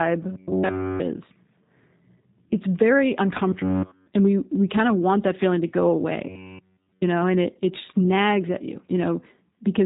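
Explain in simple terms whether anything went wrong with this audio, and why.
The whole recording went through the G.729 codec, a phone-call compressor that cuts everything above 3.8 kHz and leaves speech slightly rough and synthetic all the way through.

At 0.32–1.00 s, 3.49–4.06 s and 6.29–7.02 s there is a robotic sound from repeated short buffers. The speech turns into a rigid, metallic buzz at 93.8 Hz, likely from tiny slices of about 11 ms repeating, not the steady roughness heard throughout.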